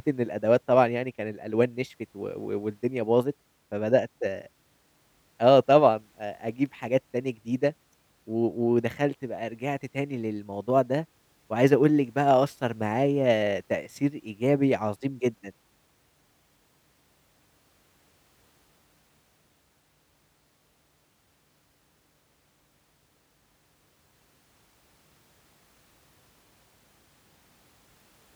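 Nothing stood out on listening to this speech recording.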